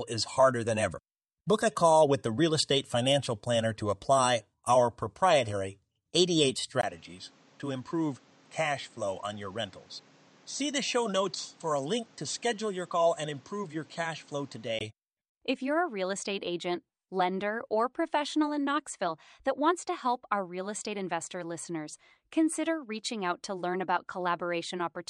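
Speech, with a stretch from 6.81 s to 14.81 s where the sound turns duller and a little quieter, opening with a 20 ms gap. A new background noise sits about 30 dB below the speech. The likely cause is the input switched to a poorer device. On a spectrogram, energy cuts off sharply at 8.2 kHz throughout that span. The waveform drops by roughly 5 dB there, then regains full bandwidth and level at 14.81 s.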